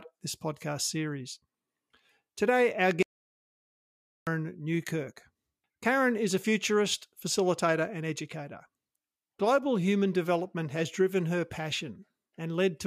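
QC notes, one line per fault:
3.03 to 4.27 s, audio dropout to silence: speech cuts off mid-flow into 1.24 s of silence with no room tone, likely from input loss.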